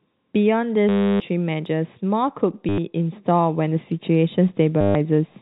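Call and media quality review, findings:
Short robotic stutters, buzzing at about 100 Hz: 0.89–1.20 s (310 ms), 2.69–2.78 s (90 ms), 4.81–4.95 s (140 ms). Packet loss with last packet repeated; the jitter buffer or concealment replays the final received packet until new ones arrive, and the repeat rate fits 10 ms packets. Repeats not pitch-aligned. Longest gap at 0.89 s. G.711 band-limiting below 4 kHz heard throughout.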